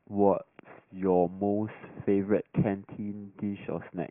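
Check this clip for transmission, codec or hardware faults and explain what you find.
No faults are heard.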